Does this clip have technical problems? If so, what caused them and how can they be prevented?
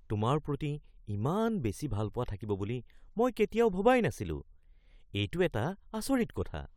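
No technical problems are audible.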